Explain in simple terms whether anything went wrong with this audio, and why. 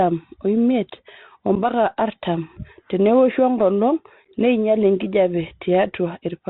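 Bluetooth CVSD headset codec, heard for the whole clip: the speech went through the narrowband coding that Bluetooth headsets use. This codec records sound as a fast stream of tiny up or down steps, so nothing above about 4 kHz survives, and the speech sounds muffled and phone-like. When the sound rises sharply, the steps can't keep up, so s sounds turn scratchy, loud moments distort, and a grainy hiss sits underneath.

Unconcealed Bluetooth headset packet loss, at 1.55 s and again around 4.25 to 4.28 s: small chunks of the signal travelling between headset and phone never arrived, and nothing filled in for them. At 1.55 s about 11 milliseconds simply drop out, a tiny hole with sharp edges. At 4.25 s the gaps are scattered, adding up to roughly 22 milliseconds over a short stretch, so the speech briefly sounds chopped and crackly, fitting several lost chunks.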